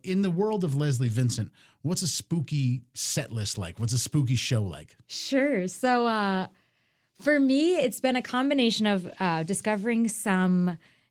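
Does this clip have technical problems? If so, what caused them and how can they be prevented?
Yes. Lost packets rebuilt from error correction at 1.03–1.09, 2.55–2.57, 5.59–5.61 and 9.09–9.15 s: low-bitrate backup copies fill the gaps, so those moments sound briefly rough and noisy. Cutting packet loss on the network path is the real fix.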